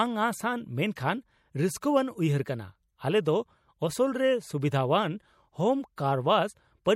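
MP3 compression runs through the whole of this speech recording, with plainly audible codec damage from start to finish. Weak high-frequency detail flickers in and out from frame to frame, giving s sounds a watery, swirling and metallic edge while consonant attacks smear. The likely cause is an MP3 encoder starved of bits, which fits a rate around 64 kbps.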